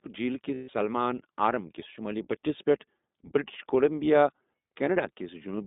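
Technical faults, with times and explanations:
Throughout: iLBC codec. The sound is narrowband, with nothing below 200 Hz or above 3.7 kHz. The speech stays clear but has a rough, slightly synthetic edge. The coding damage is plainly audible. Each 20 ms frame has its excitation coded on its own, without help from the frame before. That costs some smoothness between frames. The grain of the sound fits the 15.2 kbps mode.
0.54 to 0.70 s: lost iLBC frames. For about 140 ms the speech gives way to a held, slightly buzzy, breathy tone. The decoder had nothing to play, so it repeated the last pitch cycle mixed with noise. The length fits seven lost 20 ms frames. Each iLBC frame stands alone. So the voice sounds right again almost at once when packets return.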